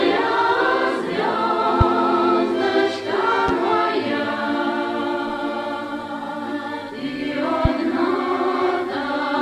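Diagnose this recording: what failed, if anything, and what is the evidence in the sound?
A voltage step, likely from a plug, switch or static discharge in the analogue wiring, was added to the signal three times. Each loud pop, at 1.81–1.84, 3.48–3.51 and 7.65–7.68 s, rises about 10 to 15 dB above the sound, which continues underneath.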